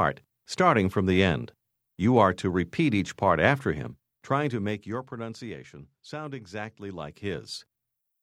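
From 3.9 to 5.27 s, a fast ticking, zipping texture rides on the sound as the level drops by about 15 dB. This is zipper noise: the gain moves in unsmoothed steps, around a hundred per second, and each jump leaves a small click.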